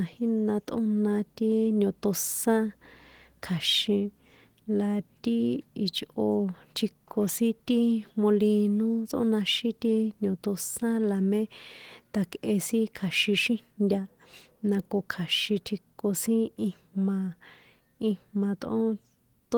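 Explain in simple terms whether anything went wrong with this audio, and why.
Nothing went wrong with this speech recording: it carries the light, expected touch of Opus voice compression, which keeps the full range of high frequencies up to about 20 kHz, and nothing in the signal points to a technical fault.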